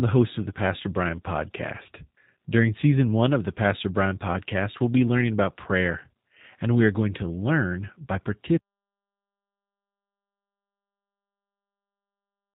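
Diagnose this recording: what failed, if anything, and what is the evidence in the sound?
The codec stage is the first failure. Throughout, the speech sounds rough and faintly synthetic, and the damage is plainly audible. Nothing reaches above 4 kHz, so the speech is dull and narrowband. This points to the G.729 codec at about 8 kbit/s. G.729 does not keep the waveform. It rebuilds each 10 ms frame from a vocal tract filter, a pitch predictor and a few coded pulses. That sparse model produces the rough, synthetic texture.

The second failure is an audio dropout to silence. It starts at 8.58 s and runs to the end of the recording. The speech cuts off mid-flow. After that there is only silence, with no room tone, no hiss and no codec noise. That points to a capture or transport stage rather than the codec. The likely cause is a lost input, such as a disconnected device, a failed link or a stray mute, while the recorder kept writing silence.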